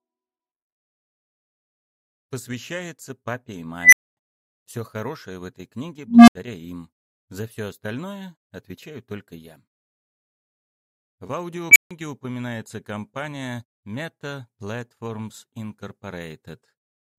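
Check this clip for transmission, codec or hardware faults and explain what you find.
An unstable filter fails three times, at 3.80 to 4.17 s, 6.07 to 6.35 s and 11.71 to 11.91 s. A recursive filter runs away. A squeal near 2 kHz, then a hum near 200 Hz, then another squeal near 2 kHz swells over 123, 203 and 46 ms and clips. Overflow then mutes the sound for 245, 75 and 149 ms until the filter resets.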